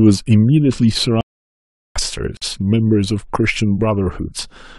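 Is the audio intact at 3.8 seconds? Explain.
Yes, at 3.8 seconds the speech plays through cleanly, with no dropout, click, distortion or other fault in the sound at that moment.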